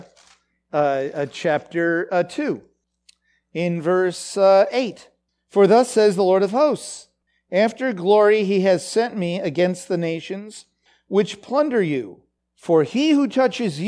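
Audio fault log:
No faults are audible anywhere in this speech recording.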